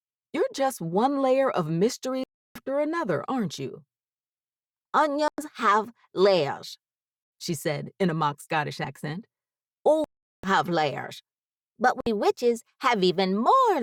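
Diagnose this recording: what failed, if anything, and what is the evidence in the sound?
The wireless playback link failed. The sound cuts to silence with abrupt or briefly faded edges at 2.24–2.56 s, 5.28–5.38 s, 10.04–10.44 s and 12.01–12.07 s, then resumes further on as though it had kept playing. This is likely Bluetooth dropout: late packets were discarded.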